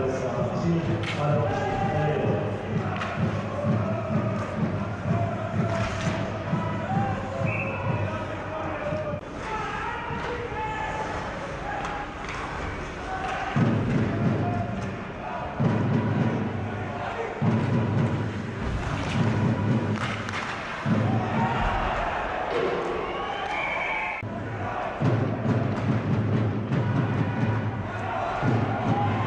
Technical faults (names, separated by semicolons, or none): none